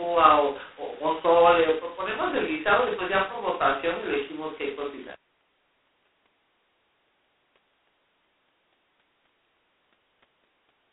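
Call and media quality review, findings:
G.726 ADPCM throughout, heavy damage. Harsh, rasping hiss riding on the speech level, band roughly 250 Hz to 3.6 kHz, nothing above 3.9 kHz. 16 kbit/s, just 2 bits a sample of prediction error, so quantisation noise tracks every syllable.

Switch to a distant microphone, from the start until 5.11 s, then snaps back to close pickup. Roomy, hollow, thin on bass, level about the same, room noise about 30 dB under the speech. Likely the close mic dropped out and a farther one filled in.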